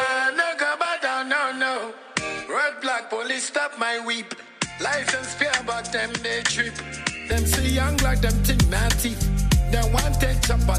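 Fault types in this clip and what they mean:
Input switched to a poorer device: until 7.32 s the sound is duller and around 5 dB quieter, with nothing above 9.5 kHz and its own background noise well below the signal, then it opens up with no gap, likely from a mid-recording change of input device.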